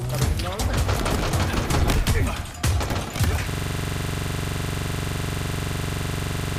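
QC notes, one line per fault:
3.50–6.59 s (to the end), system hang loop: the sound abruptly locks into a rapid, mechanical rattle at about 23.4 Hz, a single 42.67 ms fragment repeating exactly, some seventy times, until the clip ends. The playback side froze while the audio hardware kept cycling through the same ring buffer, replaying its contents. The loop length fits a 2048-sample buffer, and the fragment is just long enough to sit between a buzz and a stutter.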